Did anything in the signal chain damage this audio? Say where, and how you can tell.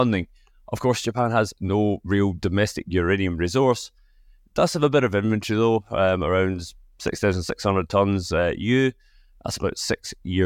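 No, nothing damaged this audio.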